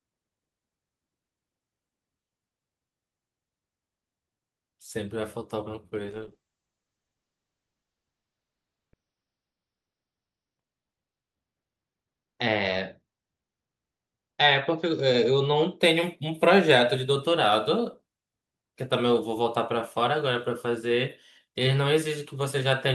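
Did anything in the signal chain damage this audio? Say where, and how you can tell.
Yes. A call bitrate drop hits the codec stage from 5.99 s to 15.85 s. The speech turns rough and watery, and the top end disappears. The sound fits the encoder falling from 40 kbps to 8 kbps after the bandwidth estimate fell. At that rate the coding gets coarse. Audio bandwidth also shrinks from 20 kHz to 6 kHz, which explains the muffled sound. The worst stretch lasts about 3.3 s before the bitrate climbs back.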